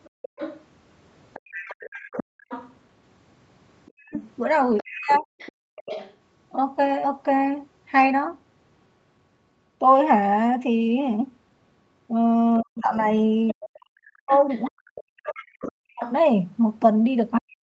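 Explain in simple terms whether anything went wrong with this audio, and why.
Several things went wrong in this speech recording, all typical of a call made on a speakerphone.

Other side's voice leaking through: from 0.04 to 6.15 s and again from 13.48 to 16.09 s, a second, fainter voice sits under the main talker. It is quieter in the later stretch. This is likely the far end's sound coming out of the loudspeaker, with the echo canceller failing to remove it fully. Unlike the faults below, it adds sound rather than taking any away.

Background gated by the echo canceller: between 0.1 and 1.51 s, the room's background sound briefly vanishes in short dips that add up to about a fifth of a second. It happens again from 5.59 to 5.76 s. This is the echo canceller shutting the microphone off while the loudspeaker played. Only the background drops out here, not the talker's voice.

Speech suppressed in double talk: from 2.03 to 5.31 s (about a second of dips in total) and from 12.6 s to the end, the talker's own voice fades or breaks into pieces. 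Both sides were likely speaking at once, so the canceller turned everything down. The difference from the gating is that the voice itself is what drops.

Lost packet rebuilt from error correction: at 13.17 to 13.23 s, a short stretch of about 40 ms sounds rougher and noisier. There is no silence, though, which fits two lost packets being rebuilt from backup copies carried in the packets that followed. That absence of a gap is what separates it from the dropouts above.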